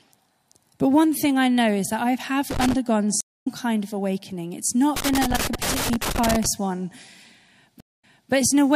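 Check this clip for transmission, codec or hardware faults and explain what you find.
The speech clip has two kinds of fault, each occurring twice.

Loose connector crackle, 2.51–2.74 s (just after "is that I have") and 4.96–6.46 s: irregular bursts of scratchy crackle, from a dirty or worn contact rapidly making and breaking the signal path.

Stream reconnect, 3.21–3.48 s and 7.80–8.32 s: a gap of 183 ms, then the speech resumes roughly 150 ms further on at "kind of awakening". Later, a 154 ms gap is followed by 360 ms of repeated audio. In both cases the connection dropped and a fresh decoder restarted mid-stream at a different point.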